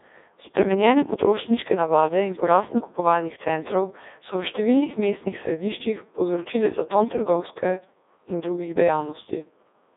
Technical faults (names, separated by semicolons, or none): Codec 2 vocoder